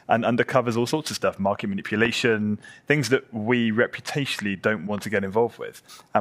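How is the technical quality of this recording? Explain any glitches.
The recording has one clear glitch: a single loud pop between 2.05 and 2.08 s. It is a short, sharp transient lasting about 20 ms and peaking around 15 dB above the surrounding sound, which continues underneath without a break. The cause is likely a sudden voltage step or pulse entering the signal chain, for example from a plug, a switch, a static discharge or a driver glitch. The downstream circuitry shapes that pulse into the brief thump heard here.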